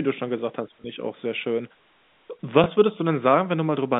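At 0.82 to 0.84 s and again at 2.64 to 2.66 s, packet loss with last packet repeated: a 20 ms gap, fitting a single lost packet, was filled by replaying the previous one. Unlike a silent dropout, the speech gives a small blip, heard through the narrow telephone band.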